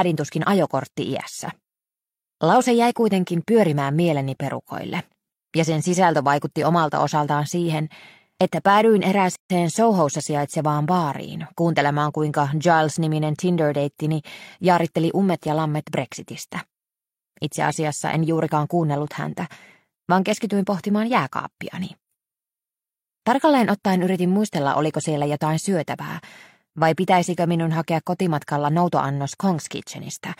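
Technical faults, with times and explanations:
9.36–9.50 s, gap at a join of encoded pieces: a 143 ms gap with smeared edges, after which the sound continues exactly where it stopped. Unlike a dropout, nothing is missing. Two separately encoded pieces were joined with the encoder's start delay and final-frame padding left in.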